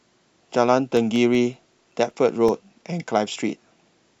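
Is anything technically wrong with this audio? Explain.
Yes, there's one problem in this speech clip. From 0.97 to 2.86 s you get CD scratch ticks: eleven brief clicks, about six a second, each a few milliseconds, where a scratch defeats error correction every disc revolution.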